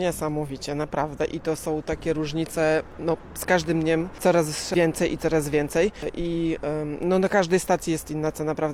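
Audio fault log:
No audible faults detected.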